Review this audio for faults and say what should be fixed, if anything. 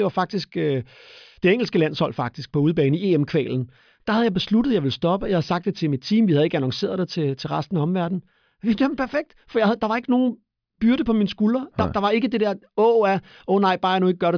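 No technical faults can be heard anywhere in the speech recording. Nothing needs to be fixed.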